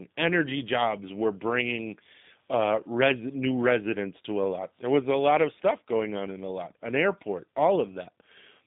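The speech has been carried through a G.729 codec for its whole length, and its thin, slightly rough, synthetic quality fits a low-rate build of about 8 kbit/s rebuilt from a vocal tract filter and sparse pulses. The band runs from about 150 Hz to 3.7 kHz, with nothing above 3.8 kHz.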